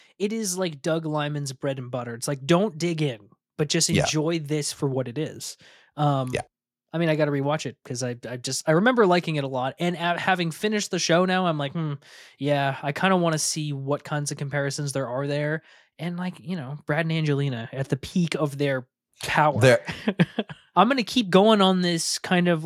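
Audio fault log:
0.19–2.33 s, automatic gain rising: the automatic gain control judged the input too quiet and lifted its gain by about 6 dB over roughly two seconds, ending before "don't dig in but". Voice and background noise swell together, which separates it from a talker moving closer.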